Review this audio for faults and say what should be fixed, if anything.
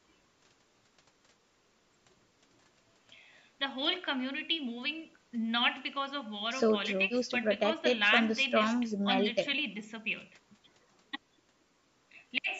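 Nothing in the recording needs fixing. It has been through a call's microphone processing, which trims the lowest bass and leaves nothing above 8 kHz, as that path normally does.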